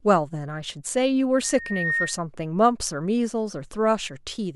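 From 1.44 s to 2.21 s the speech is overtaken by loudspeaker feedback squeal. A single tone at 1.8 kHz swells over roughly half a second until it sits at about the same level as the voice. The microphone is hearing the loudspeaker it drives, and at this one frequency the loop gain has passed unity. Unlike a steady electrical hum or whine, the tone is not present from the start: it grows out of the sound.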